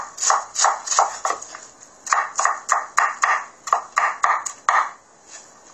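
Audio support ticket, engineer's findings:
AAC compression, whole clip. Dull, smeared sound, nothing above 14 kHz, warbling and fizz on sustained content. Likely an AAC-LC encode: coarse spectral quantisation and band-limiting, damage plainly audible. Dullness and cut-off point to a low bitrate, around 32 kbps. Re-encode higher or use the source.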